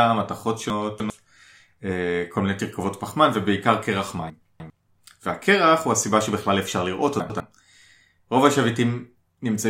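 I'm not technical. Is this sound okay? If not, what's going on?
No. The speech has chunks out of order at 0.7 to 1.1 s, 4.3 to 4.7 s and 7.2 to 7.4 s. A 100 ms slice plays late: three slices behind in the first two spots, one behind in the last. Each spot sounds briefly jumbled.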